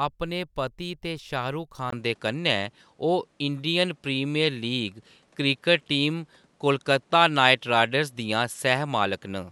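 At 1.90 s the input likely switched to a poorer device: after a brief gap, speech loses everything above 11.6 kHz, shifts level and picks up faint noise.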